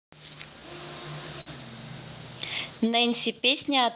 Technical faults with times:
0.00-3.95 clock drift between sender and receiver
1.41-1.48 short stall from a late packet
2.75-3.35 repeated timing corrections

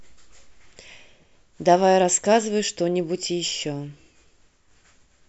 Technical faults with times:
none

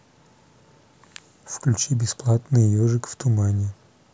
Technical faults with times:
none

